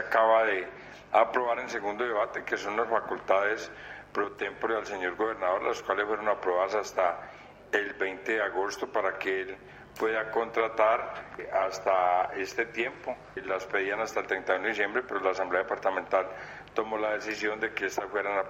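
A steady, raspy mains buzz runs through the whole audio, sitting roughly 30 dB below the signal. Switching spikes locked to the 50 Hz supply leak in twice per cycle, so a spectrogram shows evenly spaced horizontal lines at 50 Hz multiples reaching several kHz, and the waveform shows sharp ticks every 10 ms.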